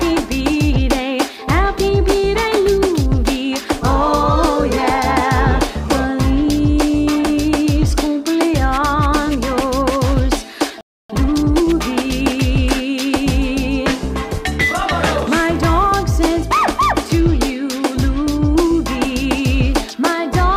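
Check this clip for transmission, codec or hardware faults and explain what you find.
There are two connected playback faults around the 11-second mark: a brief dropout followed by a hurried stretch as the player recovers.

Playback stall, 10.81 to 11.10 s: the audio cuts to silence mid-flow for about 286 ms, then resumes. The most likely cause is the player running out of buffered data or having its output thread blocked, so nothing reached the output until the pipeline recovered. You hear an abrupt hole, clearly longer than a click.

Time-compressed catch-up, 11.10 to 11.66 s: right after the gap the sound runs at about 1.5x speed for roughly half a second, with the pitch unchanged. The player is trimming the backlog that built up during the stall by cutting out small slices and cross-fading the joins. That gives a rushed feel, and then normal pacing returns.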